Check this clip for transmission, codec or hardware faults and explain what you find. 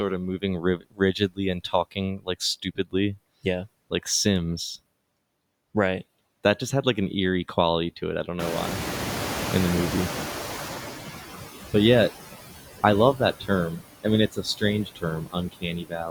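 The faults all come from the noise suppressor, not from transmission, codec or hardware. It over-processes throughout, repeatedly removes parts of the speech, and is slow to react when the background gets louder.

Noise suppressor artifacts run through the whole clip. The suppressor lowers the bands it judges to be steady noise by about 15 dB, deciding frame by frame. As a result the room noise dips between phrases and swells back up under the speech.

Speech cut by the noise suppressor happens six times: 0.61–2.36 s, 2.63–2.95 s, 13.4–13.5 s, 13.7–13.84 s, 14.32–14.63 s, and from 14.85 s to the end. In each case the suppressor mistakes quiet speech energy for noise and turns it down with the background. The deepest drops are about 21 dB in the early stretches and about 11 to 19 dB later. In the first span only about 0.7 s is actually affected, and in the last about a second. Soft consonants and word endings sound swallowed or faint.

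Noise suppressor catching up occurs from 8.39 to 11.18 s. The room noise jumps by about 20 dB at around 8.5 s and then sits only about 10 dB below the speech. The suppressor's noise estimate lags behind this jump and takes roughly 2.8 s to adapt. During that time the louder background comes through with only about 12 dB of reduction, then gradually sinks as the estimate catches up.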